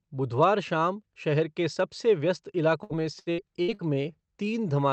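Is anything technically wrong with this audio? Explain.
Yes, there are two faults near the end of this speech clip, on a call path whose spectrum stops at about 8 kHz, consistent with Opus at around 40 kbps.

From 2.83 to 3.82 s, just after "शहर के सबसे व्यस्त", there is repeated packet loss that produces a robotic sound. Five holes, the longest 68 ms, were patched by extending the preceding sound, so about 30% of the stretch is concealed. It sounds choppy, with pieces missing. On a spectrogram, harmonics smear flat and then break.

From 3.83 to 4.67 s, a jitter buffer slow-down repeats single pitch periods to rebuild the buffer's reserve. This adds 112 ms and plays the audio at about 87% speed with the pitch unchanged, so sounds drag. A waveform shows near-identical cycles repeated back to back.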